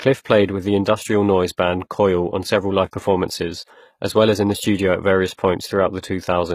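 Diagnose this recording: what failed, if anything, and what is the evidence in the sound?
Throughout the clip, the s sounds and upper treble come across gritty and metallic, bright yet not quite natural, and nothing reaches above 15 kHz. This points to the codec stage, likely HE-AAC compression at a low bitrate, consistent with roughly 20 kbps. Only the lower spectrum is truly coded, and the treble is rebuilt by copying lower bands upward under a coarse envelope, so the regenerated harmonics don't align with the real ones.

At 5.37 s, right after "the studio at various", a brief hiss of about 12 ms runs just ahead of an attack, leaving that onset softened and smeared. This is pre-echo, also at the codec stage. The transform spreads its quantisation noise evenly across a whole block, so noise scaled for the loud attack late in the block spills into the quiet instant before it.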